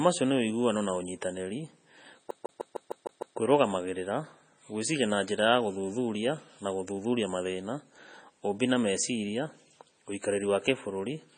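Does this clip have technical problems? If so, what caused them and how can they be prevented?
Yes. Throughout, the speech sounds watery and swirly, with chirpy, metallic s sounds, smeared onsets and nothing above 9 kHz. The likely cause is heavy MP3 compression at a very low bitrate, near 24 kbps, which cuts the treble and zeroes weak frequency lines frame by frame. Encode at a higher bitrate, such as 128 kbps or more, or keep a lossless copy.

From 2.31 to 3.38 s, the same 153 ms snippet plays seven times in a rapid, even stutter with a brief mute at each jump. This is a CD stuck on one turn: a scratch keeps knocking the laser back one track at the same spot. Clean or replace the disc, or rip it with error-checking software.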